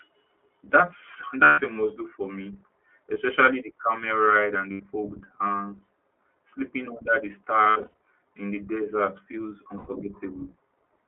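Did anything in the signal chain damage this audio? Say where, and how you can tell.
Yes. The damage sits at two stages: the codec and the network path feeding it.

The whole clip has passed through the iLBC codec. The speech occupies only about 250 Hz to 3.4 kHz, and the damage is plainly audible as a slightly rough, synthetic edge on every syllable. The coding points to iLBC's 15.2 kbps mode with 20 ms frames. A plain telephone band-limit would narrow the sound without that grainy, vocoded texture, which comes from modelling each frame's excitation on its own.

Lost iLBC frames appear at 1.44–1.60 s (140 ms, ending just before "a must do for"), 3.14–3.16 s (20 ms), 4.72–4.82 s (80 ms), 7.64–7.99 s (between "under the" and "in the desert feels"), and 9.78–9.90 s (100 ms, just after "in the desert feels"). The 7.64–7.99 s stretch is a cluster of short losses totalling 220 ms, scattered over 360 ms, with the longest run around 70 ms. 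In each gap the decoder repeats the last pitch cycle mixed with noise, so you hear a held, buzzy vowel rather than silence. That rules out simple dropouts. Speech recovers immediately because iLBC frames don't depend on earlier ones, so there is no smeared aftermath.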